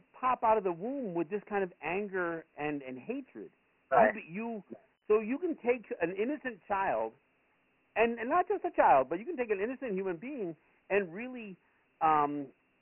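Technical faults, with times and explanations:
Throughout, Dialogic VOX ADPCM: heavy 4-bit adaptive coding adds gritty hiss to the speech; the spectrogram shows a hard ceiling at 3 kHz, fitting 6,000 samples a second.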